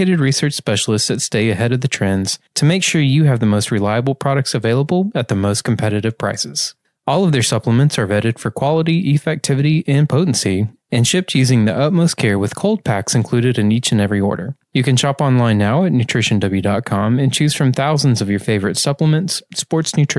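No technical faults detected.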